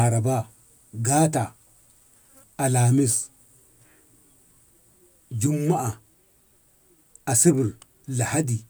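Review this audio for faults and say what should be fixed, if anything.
Nothing stood out on listening, so there is nothing here that needs fixing.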